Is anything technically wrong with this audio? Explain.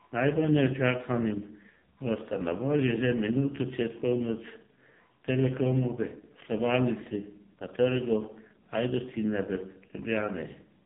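Yes. Throughout the speech, an AMR narrowband mobile codec squeezes the signal through a vocal-tract model at a bitrate that fits its lowest 4.75 kbps mode, leaving nothing above 3.8 kHz, a heavily buzzy, synthetic timbre and muffled highs.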